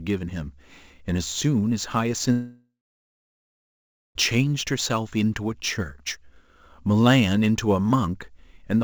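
Sample clock jitter runs through the whole clip: an unsteady converter clock, wandering by a few microseconds, adds a roughness about 30 dB below the speech that swells on loud, bright sounds. A long network dropout spans 2.32 to 4.17 s, likely from lost packets: the sound smears into a fading buzz, then about 1.4 s of silence, and resumes with roughly 1.8 s missing, with the G.722 call path's band ending at 8 kHz.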